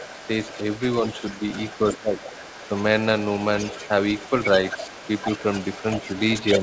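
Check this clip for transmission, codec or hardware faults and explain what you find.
Two echo-related faults are present in this speech: a second voice bleeding into the talker's channel through most of the clip, and one brief dip in the talker's level where both sides overlap.

Other side's voice leaking through: a fainter, separate voice runs under the talker at 0.00–0.83 s, 1.04–1.96 s, 2.20–2.84 s, 3.23–3.89 s, 4.09–4.49 s and 4.66 s to the end. It starts roughly 20 dB below the talker and grows more prominent, to about 10 dB below from 4.09 s. The likely cause is the far end's loudspeaker output reaching the microphone and only partly removed by the echo canceller.

Speech suppressed in double talk: at 1.91–2.16 s the talker's level sinks by as much as about 15 dB for around a third of a second, just as the leaked voice is also present. The canceller, likely unable to tell near speech from echo, attenuated everything. 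The G.722 call path's ceiling at 8 kHz sits under all of this.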